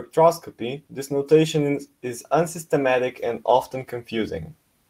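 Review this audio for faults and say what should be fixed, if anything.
No faults can be heard anywhere in the recording. Nothing needs to be fixed.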